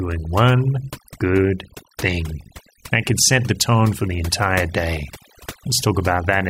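Throughout, the speech sits over near-silent, twinkling background: overdone noise removal, with bands near the noise estimate pulled down, taking quiet speech detail too.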